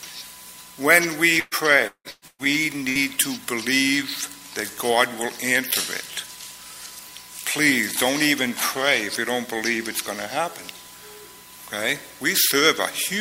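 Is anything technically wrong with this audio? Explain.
Yes, two related faults from network loss. From 1.39 to 2.48 s there is repeated packet loss, giving a robotic sound. The audio keeps dropping out in about five gaps, the longest around 174 ms, and each hole is patched by stretching the last bit of sound. Nearly half of that stretch is filled-in sound rather than real audio. The result is choppy, with pieces missing. That rapid chain of gaps is what separates it from a single dropout.

Shortly after, from 2.89 to 2.98 s, comes a burst of packet loss. This is one isolated gap of about 60 ms. The receiver extends the preceding sound as a briefly held tone or hiss that fades, then the audio jumps ahead, with roughly that much material skipped. Unlike the earlier stretch, it is a single short hold-and-resume with no repeated stutter around it.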